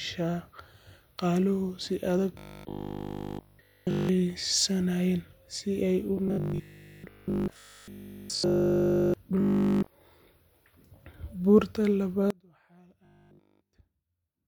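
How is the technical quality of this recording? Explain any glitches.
The recording has two kinds of glitch: repeated stretches of robotic buzzing and a dropout that runs to the end.

Robotic sound from repeated short buffers occurs from 2.39 to 4.09 s (right after "si adag"), 6.28 to 9.14 s (after "si ay u"), 9.40 to 9.88 s, and 13.05 to 13.75 s. The likely cause is audio arriving too slowly, so the playback keeps looping the last fragment instead of playing new material. Essentially all of the sound in these spans is repeated. The loop imposes a steady 50 Hz buzz, which fits a fragment of about 20 ms, and turns the speech into a stiff, metallic drone that only loosely tracks its shape.

An audio dropout to a faint residue begins abruptly at 12.30 s and lasts to the end of the clip. The likely cause is the wanted signal being lost while the path after the break stayed open. Only a faint trace of the sound remains, roughly 30 dB below its normal level, and the robotic buzz from 13.05 to 13.75 s falls within this weakened stretch.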